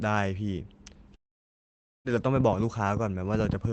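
From 1.15 s to 2.08 s there is a long network dropout, likely from lost packets. The last sound carries on briefly, fades, then silence holds until the speech resumes with about 0.9 s missing.

From 2.36 s to the end comes a train of clicks, likely from interference or a struggling interface. Sharp pops arrive unevenly, about 8.4 per second, far louder than the speech.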